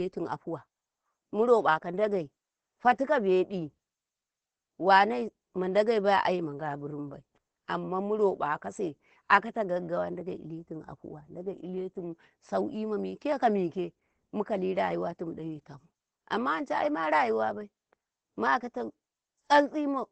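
Throughout, the speech is muffled and hoarse, with nothing above 8.5 kHz. The likely cause is heavy Opus compression in speech mode, fitting about 12 kbps.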